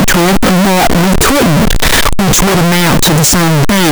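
From start to finish the speech is buried in very loud, harsh distortion, and soft sounds come out as loud as strong ones. The likely cause is signed and unsigned mixed up on the 8-bit samples, so the top bit is flipped and every zero crossing leaps across the full range. On a waveform the trace sits pinned near both rails as a solid block; a spectrogram shows dense broadband energy everywhere.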